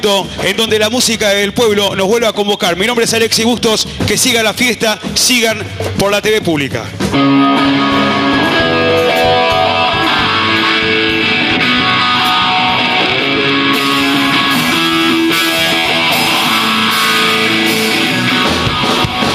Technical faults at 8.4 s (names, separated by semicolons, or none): gain pumping